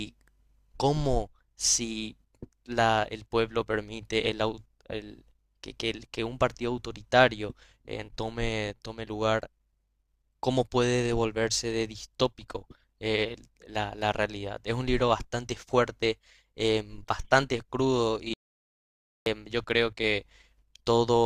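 An audio dropout to silence runs from 18.34 to 19.26 s: the speech cuts out abruptly into digital silence with no room tone, and just under a second of it is gone. Most likely the input signal was interrupted while recording continued, writing zeros.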